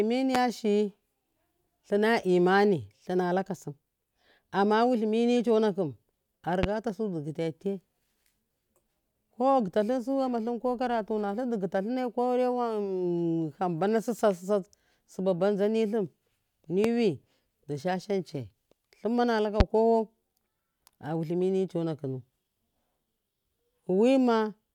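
Loud pops at 0.35–0.38, 6.63–6.66, 16.84–16.87 and 19.60–19.63 s (the last just after "yai lummana luka"): single sharp thumps, likely voltage spikes, roughly 20 dB above the speech (the third somewhat lower). They appear as tall waveform spikes and thin full-band spectrogram lines.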